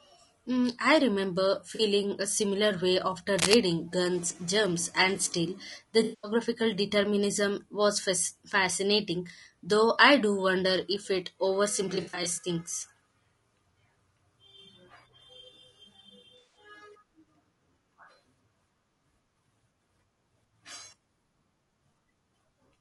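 Low-delay AAC compression runs through the whole 23-second speech recording, audibly. The likely cause is the AAC-ELD codec used for video calls, at a bitrate that fits about 32 kbps. Its short frames resolve the voice's pitch harmonics poorly and spend bits inefficiently, so the speech comes out rough and grainy, with noise filling the gaps between harmonics and a thin, somewhat synthetic top band. AAC frame loss with concealment breaks in four times. The decoder patches each gap from the last good spectrum. The first, 1.75 to 1.81 s, between "I remember" and "a similar way after", lasts 40 ms and sounds like a brief smeared blip. The second, 6.03 to 6.31 s, just before "determinism was", covers 200 ms of loss. From 11.95 to 12.47 s, 240 ms of losses are scattered over nearly half a second in short runs. At 16.38 to 16.57 s a further 160 ms gap smears the audio again. Cable scratch noise appears at 3.37 to 3.54 s, right after "a similar way after". 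Its likely cause is a worn cable, connector or control being moved so that its contact resistance jumps rapidly. This lays a dense, uneven burst of scratching and rustling over the speech for about a sixth of a second, at roughly the same loudness as the speech itself.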